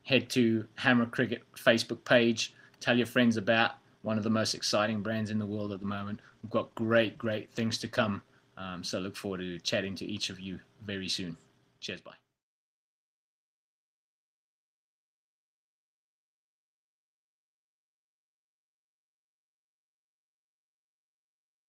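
From 5.75 to 8.93 s there is a call bitrate drop. The encoder was squeezed into far fewer bits, which fits a fall from 32 to 17 kbps. The sound turns coarse and watery, worst for about 2.4 s, then recovers.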